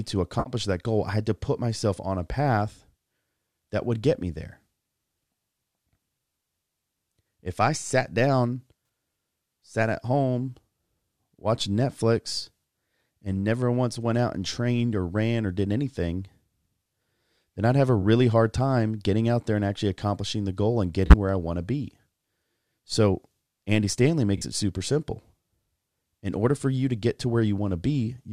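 Corrupt frame concealed at 0.39–0.53 s before "that goal I had", 21.06–21.14 s between "accomplishing the goal and" and "where I want to", and 24.37–24.42 s before "it super simple" in this speech clip: damaged AAC frames were detected and covered over by the decoder.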